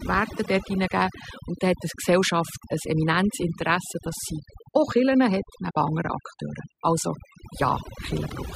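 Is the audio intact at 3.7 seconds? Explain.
No, not really. At 3.7 seconds you're hearing overdone noise removal, and it isn't a one-off: it runs through the whole clip. The noise reducer was pushed too hard, so any frequency band sitting close to its idea of the noise floor gets pulled way down or switched off, and the softer parts of the speech go with it. That leaves the background lower and broken up into little twinkly, warbling specks.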